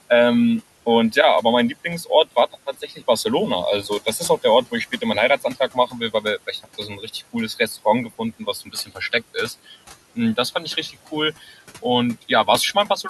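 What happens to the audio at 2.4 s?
Between 2.04 and 3.03 s, speech is cut by the noise suppressor, which mistakes quiet speech for noise and turns it down by up to about 12 dB along with the room noise. Roughly 300 ms sounds swallowed and faint. Unlike a dropout, the signal never goes silent.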